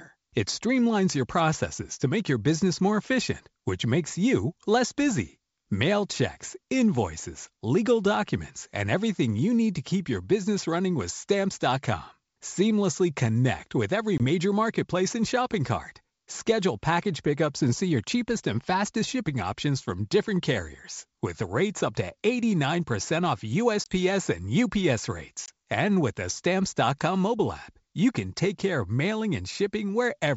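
Packet loss on an ADPCM call cuts hard-edged silent holes at 14.18–14.20 s (after "connect with every"), 23.84–23.93 s and 25.46–25.49 s. Each loses one 20 ms packet, showing as a flat waveform gap and a blank spectrogram column. Speech then resumes slightly distorted while the decoder's predictor and step size resync.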